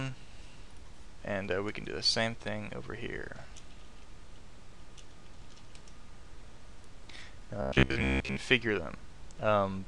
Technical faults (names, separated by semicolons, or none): robotic sound from repeated short buffers